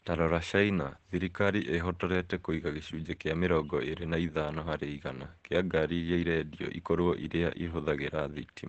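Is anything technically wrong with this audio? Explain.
Yes, there's Opus voice compression across the whole clip. Sound tops out around 8 kHz, and the coarse excitation coding leaves the speech muffled, hoarse and faintly robotic. That's the SILK coder squeezed hard, which fits a rate near 12 kbps.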